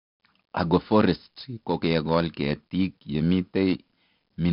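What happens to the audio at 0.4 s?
At 0.4 s the speech carries 4-bit ADPCM compression, which runs through the whole clip. Each sample is stored as a coarse 4-bit step from a predicted value, so the error rides along with the level as a gritty hiss on louder syllables, with harsh edges on sharp onsets. Nothing reaches above about 5.3 kHz, so it's dull too, which fits a low sample rate and roughly 44 kbps.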